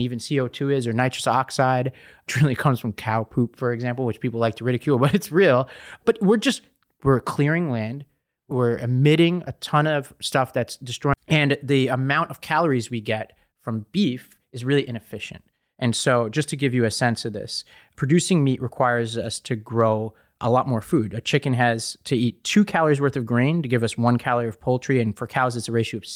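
Right after "ton of stuff that's", at 11.13 to 11.15 s, the speech lurches forward with no pause, as if about a second of talking had been snipped out and the two edges butted together. This is a skip ahead: a stretch of audio, here roughly one second, was discarded, either lost in transit or thrown away when the jitter buffer overflowed while later audio was already queued. Nothing was filled in, so playback joins the two sides almost directly.

From 11.24 s to 16.31 s, ending just before "to give you a", the talking sounds slightly rushed, running at about 107% speed while the pitch stays put. This is a jitter buffer speed-up. The buffer was holding more audio than its target, as happens when delayed packets arrive in a bunch. To bring the delay down, the receiver repeatedly cut out tiny pieces one or a few pitch periods long, removing about 0.4 s in total over those five seconds.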